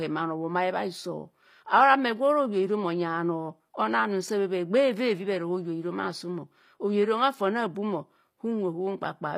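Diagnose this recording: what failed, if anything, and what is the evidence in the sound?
Throughout the speech, the treble sounds bright but synthetic: s sounds come out gritty and lispy, with a metallic edge. This is likely HE-AAC compression at the codec stage, rebuilding the upper band from copied lower bands, which fits a low bitrate near 24 kbps.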